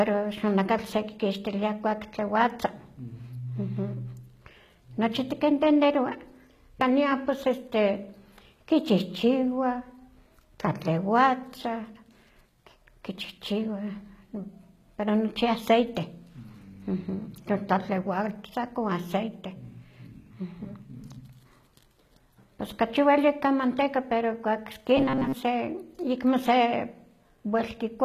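From the start, the whole recording carries plainly audible codec damage, likely HE-AAC compression at a low rate near 20 kbps. Its rebuilt treble doesn't match the harmonics below, so s sounds come across gritty and metallic.

From 24.97 to 25.36 s, the speech turns into a rigid 133 Hz buzz, robotic sound likely from repeated short buffers. Most of that stretch is short chunks of about 7.5 ms looped in place of fresh audio.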